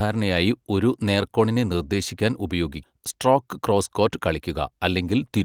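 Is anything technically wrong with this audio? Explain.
Yes, there are two related timing faults in this speech clip.

At about 2.83 to 2.85 s, right after "ഒരു നേർകോണിനെ നിർദ്ദേശിക്കാൻ", there is a skip ahead. Roughly a second of speech was discarded while later audio was already queued, and playback jumps straight to that later material with no silence filling the join. Unlike a dropout, no gap or muted stretch marks the loss. The sentence simply lurches forward, and the two sides are butted almost directly together.

From about 2.93 to 4.80 s, a jitter buffer speed-up follows. The receiver was still holding more audio than its target, so it repeatedly trimmed tiny pitch-period-sized pieces, removing roughly 150 ms in total. Speech runs at about 107% of normal rate and sounds slightly rushed. What separates this from a resampling or tape-speed error is that the pitch stays unchanged. 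Only the pace tightens.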